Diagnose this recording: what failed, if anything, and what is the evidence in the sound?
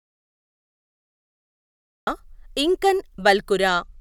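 The audio dropout to silence is already under way when the clip begins and lasts until 2.07 s. The gap is silent, with no room tone. The input stage likely lost its source while the recorder kept writing silence.

A Bluetooth SBC bit pool drop starts at 3.68 s and runs to the end. The treble dulls and gritty quantisation noise rises over the speech. This points to the bit pool falling from about 31 to 13, near 94 kbps, on a congested link.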